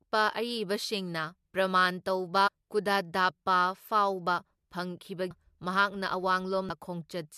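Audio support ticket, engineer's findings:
Damaged data in a compressed stream: corrupted bytes in the encoded speech, so the decoder misreads frames, loses sync and hunts for the next frame header. Heard as short chirps or blips at 2.46–2.49 s, 5.30 s and 6.69 s.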